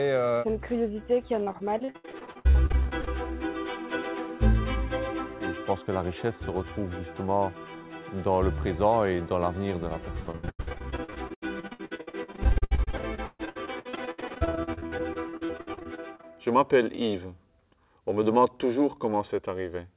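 From 1.44 to 3.09 s, repeated packet loss chops the sound. Each hole, up to 75 ms, is filled by extending the last sound, so it turns robotic. It returns from 10.23 to 16.25 s, denser, with gaps up to 134 ms, over narrowband audio cut off at 4 kHz.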